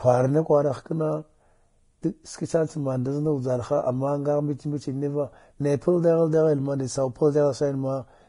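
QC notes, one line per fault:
Throughout: low-bitrate audio saved at a high bitrate. The speech has nothing above 10.5 kHz and keeps artefacts that the file's high-bitrate MP3 encoding cannot explain. The likely cause is an earlier low-bitrate pass, pointing to Vorbis at under 32 kbit/s, whose discarded detail the later encode could not restore. A spectrogram shows a flat ceiling at 10.5 kHz.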